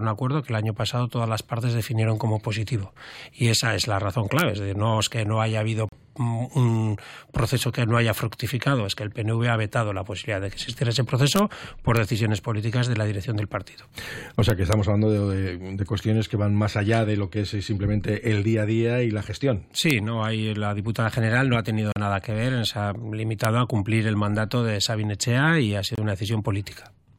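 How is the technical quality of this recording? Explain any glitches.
The recording has two kinds of glitch: sharp cracks on loud passages and brief hard-edged dropouts.

Integer overflow: violent cracks at 4.39–4.41, 11.36–11.39, 11.97, 14.50–14.73, 19.91 and 23.45 s. Peaks exceeded the integer limit and wrapped to the opposite sign instead of clipping.

Gap between stream segments: abrupt silences at 5.89 s (37 ms), 21.92 s (38 ms) and 25.95 s (25 ms). Segment timestamps left holes that the player filled with silence, which fits 4-second segments.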